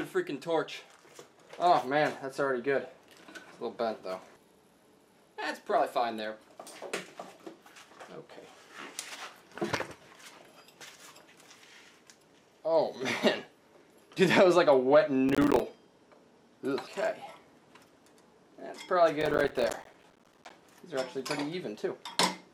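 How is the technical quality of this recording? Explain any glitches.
The recording has two bursts of processor overload crackle, at 15.29–15.60 s and 19.21–20.50 s. The processor repeatedly missed its deadlines for short buffers, consistent with buffers of around 5 ms, leaving dozens of tiny silent gaps with hard edges. These are heard as gritty tearing crackle, the second burst longer.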